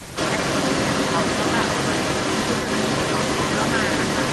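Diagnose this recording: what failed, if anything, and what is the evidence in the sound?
The failure sits in call processing, and the fault is an echo leak. From 0.0 s to the end at 4.3 s, speech is followed by a second copy about 0.37 s later, roughly 5 dB louder than the original. The likely cause is a far-end speakerphone whose echo canceller let its microphone pickup pass back into the call. On a spectrogram, each syllable's harmonic pattern repeats about 0.37 s to the right. The waveform shows overlapping, smeared envelopes.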